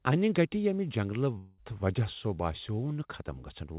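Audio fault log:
1.38–1.60 s, long network dropout: the sound turns into a fading buzzy smear for about 0.2 s, then the speech resumes with that stretch gone. That's likely the receiver stretching the last audio it had once packets stopped arriving, heard over telephone-band audio capped at 4 kHz.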